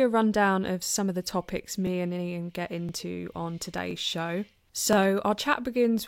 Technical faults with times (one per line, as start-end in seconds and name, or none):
2.89-2.91 overlapping chunks
4.93-4.95 overlapping chunks